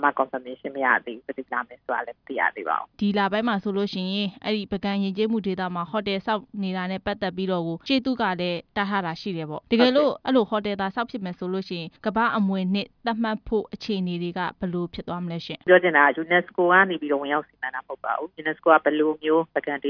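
No technical faults can be heard anywhere here.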